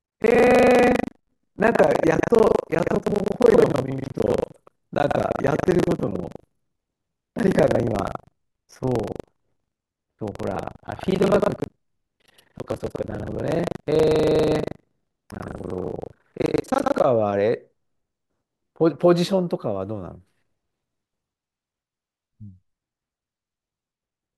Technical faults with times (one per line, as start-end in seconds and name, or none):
0.00-17.07 buffer tearing